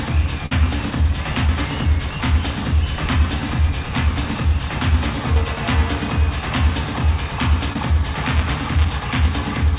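At 0.46 to 0.52 s there is a burst of packet loss: a run of packets, about 50 ms in all, arrived too late or not at all. The receiver bridged the hole by extending the last sound it had and letting it sink in level, so the gap comes across as a short held tone or dying hiss. The audio then picks up slightly further on, with that stretch gone.

Two short concealed packet losses follow, at 1.47 to 1.49 s and 7.73 to 7.79 s, each dropping about 10 ms before the decoder could use it. Concealment stretched the preceding sound to cover the hole and cross-faded back into real audio, leaving a brief smear or wobble. In the second, about 9 ms more was cut out, so the material closes up slightly early there.

From 8.14 to 9.40 s comes buffer tearing. The writer filling the playback ring buffer and the hardware reading it have drifted until they cross each period, which fits a 256-sample buffer. A small sliver of each period carries audio about 10 ms stale, butted against fresh audio with hard edges on both sides. 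That produces a steady rattle near 188 Hz riding on the sound whenever signal is present. Throughout, the G.711 call path leaves nothing above 4 kHz.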